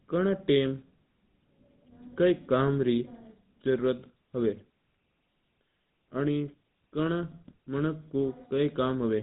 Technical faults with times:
0.00-9.22 GSM full-rate codec

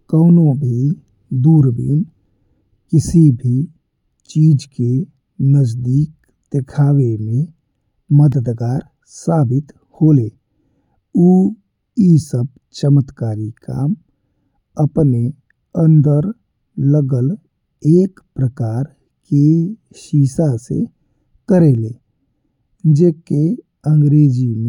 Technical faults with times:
8.32 block of digital silence

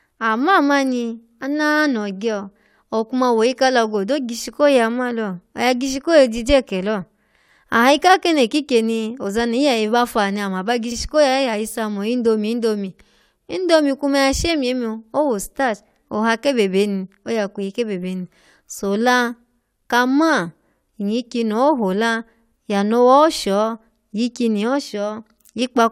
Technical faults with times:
10.91-10.95 repeated frames

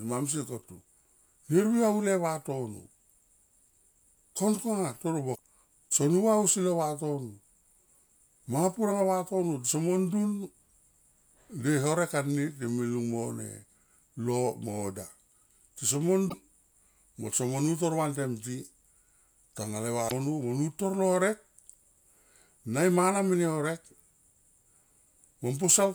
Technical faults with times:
5.32-5.39 damaged data in a compressed stream
16.26-16.34 damaged data in a compressed stream
20.05-20.11 damaged data in a compressed stream

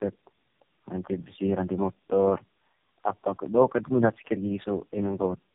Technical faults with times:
0.00-5.55 tandem speech coding

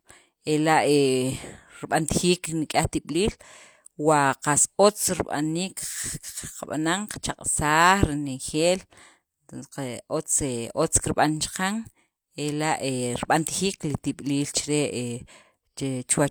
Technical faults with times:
none

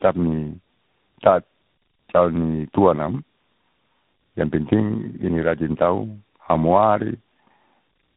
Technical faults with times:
0.00-8.17 tandem speech coding

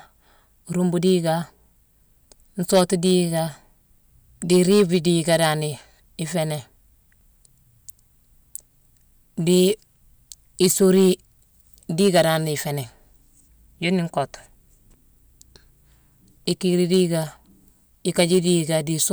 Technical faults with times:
0.00-19.12 hard clipping

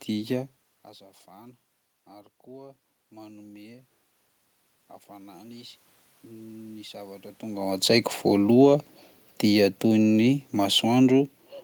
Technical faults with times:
1.28-3.93 automatic gain rising
5.10-7.83 automatic gain rising
9.46-11.45 automatic gain falling

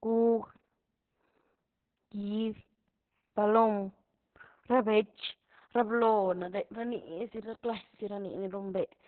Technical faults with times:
0.00-9.08 Opus voice compression

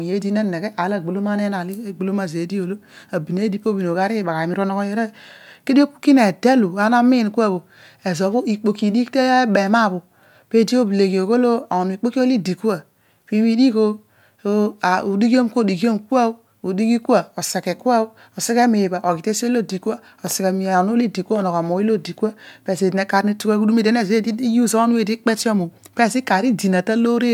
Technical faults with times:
none

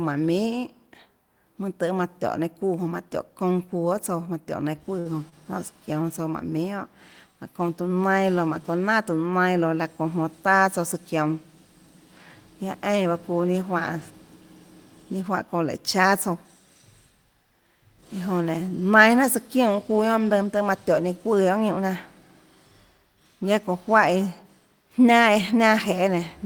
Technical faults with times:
4.99-5.35 short stall from a late packet
21.50-21.83 jitter buffer speed-up
25.29-25.63 jitter buffer speed-up

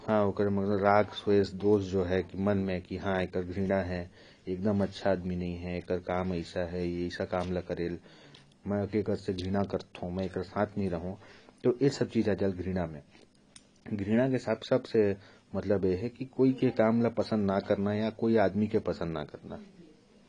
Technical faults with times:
0.00-20.28 AAC compression

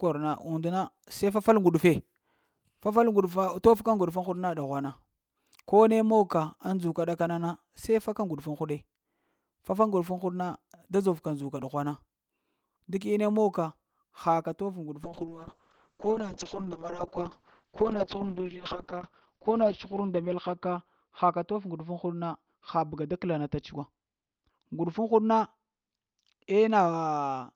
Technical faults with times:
15.04-27.55 call bitrate drop

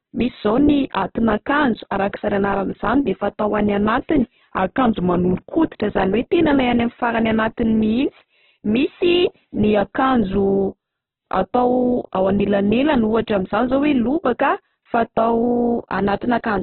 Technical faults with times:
0.00-16.62 Opus compression
4.58-5.74 drift correction step
15.43-16.62 drift correction step

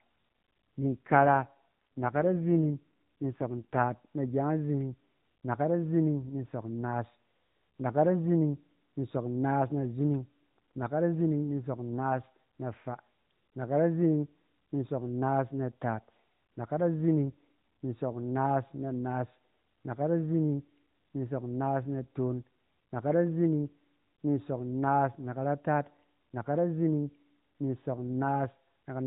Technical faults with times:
0.80-3.95 AMR rate drop

